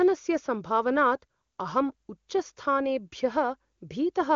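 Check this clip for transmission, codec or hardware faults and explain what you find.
No transmission, codec or hardware faults turn up: the speech comes through an AMR wideband (HD Voice) link at what sounds like its top rate, which fits the 23.85 kbit/s mode, and the audio band stops near 7.1 kHz as that codec is designed to do.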